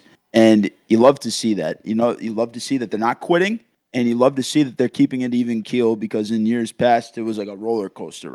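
At 1.02 s the speech drops abruptly by about 4 dB, voice and background together, which is likely the microphone volume stepped down: the call software cutting the device's input level in a single jump rather than fading it gradually.

From 1.04 to 1.09 s, just before "to see that", there is microphone overload, likely caused by the input volume still sitting too high. Peaks exceed the converter's limit by about 4 dB, and a small share of samples get their tops sheared off, giving a brief harsh, crackly edge.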